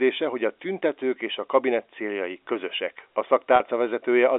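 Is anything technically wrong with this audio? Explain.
Yes. At 3.56 to 3.60 s, packet loss with pitch repetition: about 40 ms of speech, which fits two 20 ms packets, never arrived, and the receiver filled the gap by repeating the last pitch period. The speech briefly sounds held and slightly buzzy, heard through the 300 Hz to 3.6 kHz G.711 telephone band.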